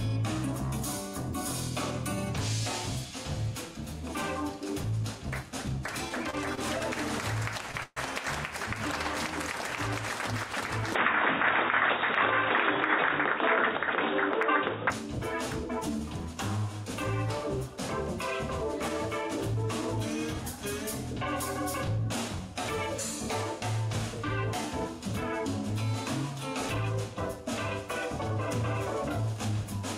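From 6.09 to 7.98 s the audio suffers repeated stalls, a stutter. Packets reached the receiver late, so its jitter buffer ran dry six times and it stretched the last sound to bridge each wait, 210 ms in all and 11 percent of that span, with nothing lost. The longest hold lasts 129 ms. The sound drags and hiccups. On a waveform the held stretches show as short repeated patterns, and a spectrogram shows them as smeared horizontal bands.

From 10.95 to 14.91 s the sound turns duller and boxier. Everything above 3.8 kHz disappears, the level shifts by roughly 5 dB, and a new noise floor appears about 40 dB below the signal, all with no silence at the changeover. The likely cause is an input switched to a poorer device, another microphone or a headset's call profile, with a narrower band and its own tone. On a spectrogram the upper region goes abruptly empty above a flat cutoff line, with faint new noise filling the gaps.

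From 21.98 to 22.56 s a jitter buffer speed-up plays the audio at 105 percent while keeping its pitch. The receiver had built up more buffered audio than it wanted, so it removed short slices a pitch period or a few long, roughly 40 ms in total, to bring the delay back down. The passage sounds slightly hurried. A waveform shows events arriving a little early with small joins, and spectrogram harmonics stay at the same height while their timing compresses.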